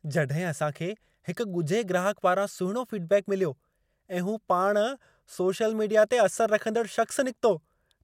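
No technical faults can be heard anywhere in the speech, and the signal stays steady and intact throughout.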